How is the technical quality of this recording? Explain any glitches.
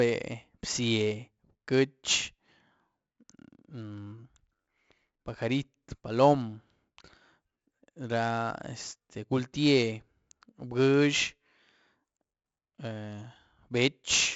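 Gritty hiss rides on every loud syllable from start to finish, with roughness on sharp consonant attacks and nothing above 7.7 kHz. This is 4-bit ADPCM compression: each sample is a coarse predicted step, so error noise tracks the level, and 64 kbps fits a 16 kHz rate.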